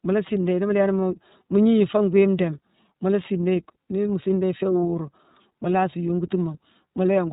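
From start to finish the speech carries plainly audible iLBC codec damage. Nothing above 4 kHz survives, and each 30 ms frame is coded on its own, leaving a rough, synthetic grain. A simple low-pass filter would dull the sound without adding that grain.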